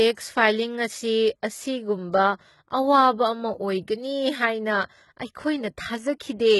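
Speech with HE-AAC compression damage throughout: the treble above the crossover sounds copied upward, so s sounds turn gritty and metallic, with nothing above about 11.8 kHz. Unlike plain low-pass filtering, the top stays bright but false, likely from very low-bitrate coding around 16 kbps.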